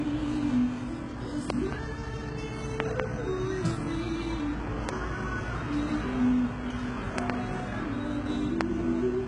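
HE-AAC compression runs throughout. It is likely a very low-bitrate encode, around 12 kbps. Nothing sounds above 11 kHz, and the rebuilt treble comes out gritty and metallic.

Loud pops land at 1.50–1.75 s (a pair), 2.80–3.02 s (a pair), 4.89–4.91 s (single), 7.18–7.32 s (a pair, the strongest) and 8.61–8.63 s (single). Each is likely a sharp voltage spike about 20 dB above the sound (about 25 dB for the strongest), with the sound continuing underneath.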